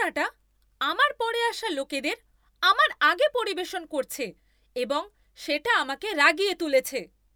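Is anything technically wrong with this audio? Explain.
No, nothing technically wrong can be heard here.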